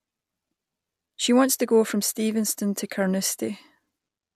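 No technical faults can be heard anywhere in this speech recording. There is nothing to place on a timeline and nothing to describe.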